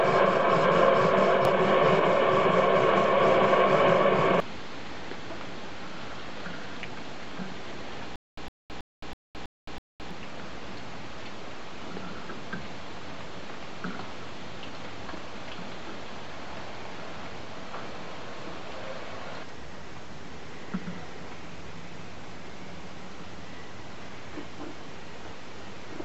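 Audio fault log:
8.16–10.11 s, stutter with silent gaps: a 109 ms burst repeats six times, each followed by 216 ms of dead silence, likely a stalled stream retrying; the silence sets it apart from a seamless loop.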